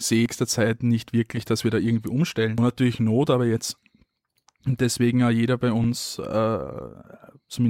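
At 0.26 s, at 2.58 s after "dass wir da irgendwie", and from 5.84 to 5.93 s after "deswegen ja jeder bei", damaged data in a compressed stream causes brief glitches as the decoder misreads corrupt frames and resyncs.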